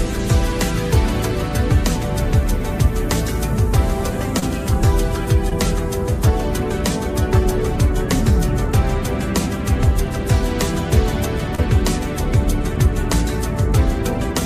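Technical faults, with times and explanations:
4.39–4.44 s, 5.50–5.53 s and 11.55–11.60 s: short concealed packet loss. About 20 ms of audio never arrived each time, so the receiver carried the previous sound forward for roughly 16 to 27 ms before blending back, leaving a brief smear or wobble.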